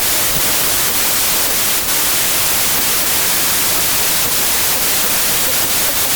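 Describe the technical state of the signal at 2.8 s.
At 2.8 s, as across the whole clip, the speech lies buried under loud noise and runs about 1.33 times too fast and high. This is wrong sample width: packed 24-bit data read as 32-bit samples, so most values combine mismatched bytes.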